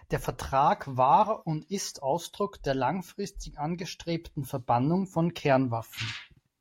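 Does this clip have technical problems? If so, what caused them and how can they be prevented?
No, the speech signal carries no audible technical faults, so there is nothing here that needs a cause traced or a fix applied.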